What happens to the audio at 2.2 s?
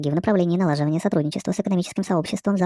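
At 2.2 s, as throughout, a wrong sample rate runs the speech 1.5 times too fast and about 7 semitones high, fitting 16 kHz audio played at 24 kHz; unlike a pitch shift, tempo and pitch rise together.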